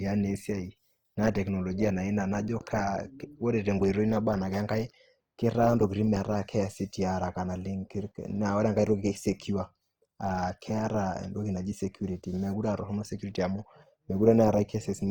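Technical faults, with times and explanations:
Throughout, Opus compression: the speech carries a plainly audible grainy, rough texture rather than the swirling holes of MP3, which points to the likely cause being Opus in its music (CELT) mode at a low rate, around 24 kbps. The band energies are kept but the fine detail within bands is rebuilt from folded lower content or noise, so harmonics lose their clean structure. Bandwidth stays fullband, extending to about 20.2 kHz, so there is no muffling.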